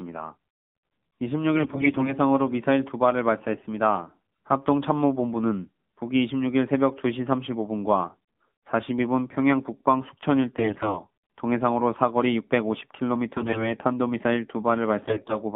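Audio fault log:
throughout: AMR narrowband mobile codec. The speech passes through a line band of 150 Hz to 3.7 kHz, with plainly audible codec damage: a buzzy, synthetic edge where pulse-driven vocal-tract modelling replaces the natural voice. The coarseness points to a low AMR-NB mode of about 7.4 kbps. On a spectrogram, nothing appears above 3.7 kHz or below 150 Hz, and the harmonics look smeared and blocky in 20 ms steps.
1.56–2.14 s, 3.52–3.67 s, 10.58–10.98 s, 13.37–13.72 s, 15.02–15.37 s: AMR bit errors. In each burst the voice keeps roughly its pitch and loudness but turns hoarse, scratchy and gargly. Flipped low-priority bits send the excitation pulses to wrong positions and skew the fine gain and spectral values, while the protected core still decodes. The error rate is highest in the last burst. A spectrogram shows ragged, noisy harmonics there, and the waveform envelope stays largely intact.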